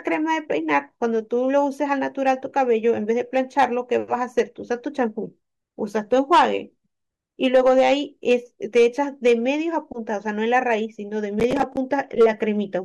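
Speech, with a burst of processor overload crackle from 11.4 to 11.77 s. Over that stretch the processor falls behind and misses about ten buffer deadlines, each time repeating a stale chunk of old audio with hard edges instead of fresh sound, which fits buffers of around 10 ms. The result is a gritty, tearing crackle over the speech. On the waveform, short repeated segments join at abrupt discontinuities. On a spectrogram, vertical broadband streaks cut through the speech harmonics.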